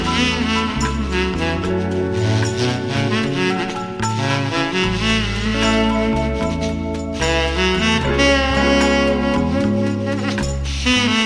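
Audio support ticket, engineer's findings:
No faults found in the reviewed audio, nothing to attribute to any component, no action required.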